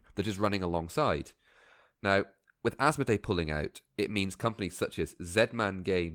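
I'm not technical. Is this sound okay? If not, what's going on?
Yes, it's fine: there are no dropouts, glitches or other technical problems anywhere in this recording.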